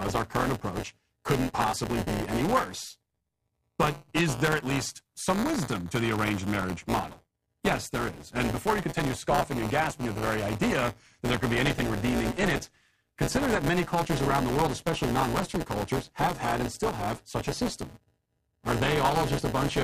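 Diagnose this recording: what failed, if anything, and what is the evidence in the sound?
The fault sits at the driver or buffer stage: buffer tearing, present throughout the speech. A steady robotic buzz at 172 Hz rides on the signal and falls away in pauses, which fits a 256-sample buffer. The writer and the reading hardware have drifted so that a small slice of each period, roughly 15 percent, replays audio about ten milliseconds stale, hard-spliced at both edges. Unlike underrun dropouts, there are no silent gaps or irregular clicks, only a constant buzz that follows the signal.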